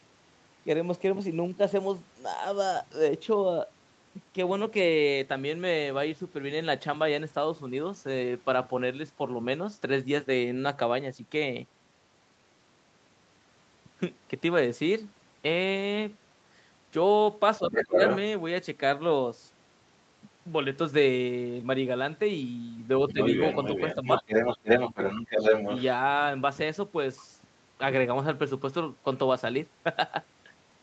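From 17.58 to 17.98 s the speech dips by up to roughly 15 dB for about a third of a second, likely speech suppressed in double talk, where the echo canceller turns the talker down along with the far-end echo. Overlapping this, from 17.75 to 18.18 s, the other side's voice leaks through at about the talker's level, likely residual echo the canceller failed to remove. The same leak returns from 23.09 to 25.83 s. At 23.13 s a brief dip of roughly 10 dB, about 50 ms long, is likely another double-talk suppression.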